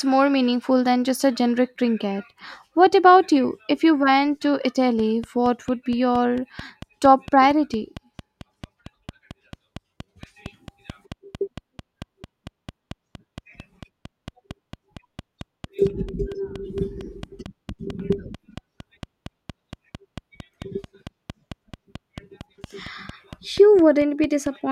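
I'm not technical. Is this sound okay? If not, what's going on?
No. A train of clicks starts at 4.99 s, after "you went to", and runs to 24.47 s. It's about four steady ticks a second, likely from nearby electrical interference.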